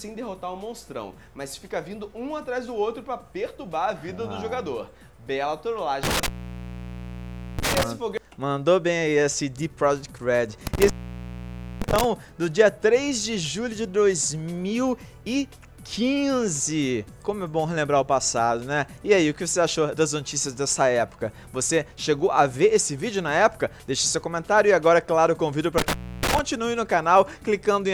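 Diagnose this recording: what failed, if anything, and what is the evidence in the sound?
Intermittent contact in the analogue wiring: a loose connection opens at 6.03–7.83, 10.67–12.04 and 25.78–26.39 s, cutting the sound with crackle and faint hiss.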